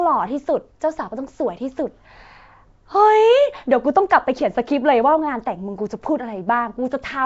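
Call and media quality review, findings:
Rough hissy halo, smeared underwater speech throughout, nothing above 7.7 kHz. Likely Nellymoser compression: fixed two bits a sample, weak bands noise-filled, fits roughly 32 kbps Nellymoser Asao.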